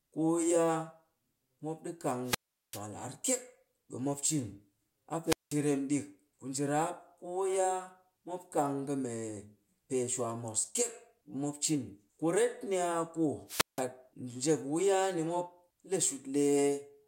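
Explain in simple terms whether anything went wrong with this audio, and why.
The radio link from a wireless microphone weakened three times, and each time the receiver's squelch shut the output off: a wireless microphone squelch dropout. You hear a quick burst of hiss, then a gap of near silence, then the speech returning. The first, from 2.23 to 2.83 s, holds the longest silence, about 0.39 s. The others, at 5.24 to 5.57 s and 13.47 to 13.84 s, each cut out for just under 0.2 s.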